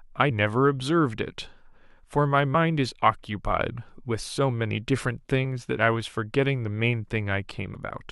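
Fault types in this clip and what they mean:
Damaged data in a compressed stream: parts of the compressed speech data arrived corrupted, so the decoder misread those frames, lost sync and had to hunt for the next valid frame header before playback could recover. Each hit is a brief chirp or blip cutting across the speech, at 0.30, 2.54, 5.44 and 7.74 seconds. All four are very short, none lasting more than about 15 ms.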